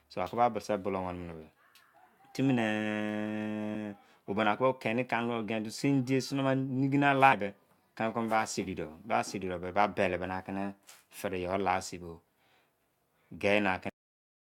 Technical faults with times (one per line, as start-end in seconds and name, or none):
3.74 damaged data in a compressed stream
7.32 damaged data in a compressed stream
13.89-14.51 cut-off end